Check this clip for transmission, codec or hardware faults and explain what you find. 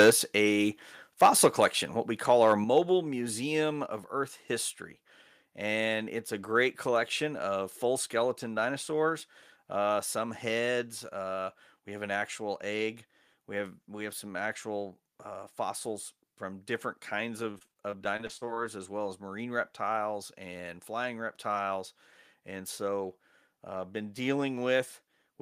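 Yes, three kinds of fault are audible: microphone overload, the microphone volume stepped down, and repeated packet loss with a robotic sound.

Microphone overload occurs at 0.0 to 0.1 s and again from 2.3 to 2.78 s, after "what we". The likely cause is an input gain set so high that peaks ran past the converter's ceiling, by about 8 dB at the start and about 2 dB later. Their tops are sheared flat. The result is a harsh, crackling edge on the loudest moments. In the first burst roughly a tenth of the waveform is flattened. In the second, under one percent is. Codec distortion smears evenly across the sound, but this crackle tracks the loudest peaks.

The microphone volume stepped down at 0.1 s by about 4 dB, and at 2.64 s by about 6 dB, just before "museum of". Each drop likely comes from the call software reacting to the overload and cutting the device's input gain in a single step. Voice and background fall together and instantly. 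A fade or compressor would ease the level down gradually instead.

Repeated packet loss runs from 17.51 to 18.59 s, between "fossils from different kinds" and "as well as marine". Here a dozen or so short holes, none longer than 40 ms, follow one after another. About 200 ms of audio is missing. Around 266 ms is patched by stretching the preceding sound, which covers about a quarter of the span. The result is choppy, robotic speech. A single dropout would leave one clean gap, but this fault is a rapid string of them.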